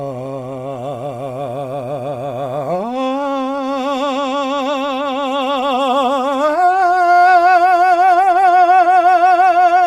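No technical faults are audible.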